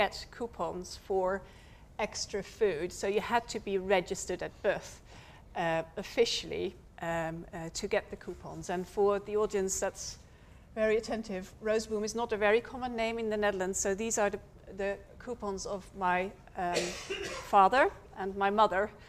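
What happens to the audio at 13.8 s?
Nothing goes wrong at 13.8 s; the audio plays through that moment intact, with no audible fault.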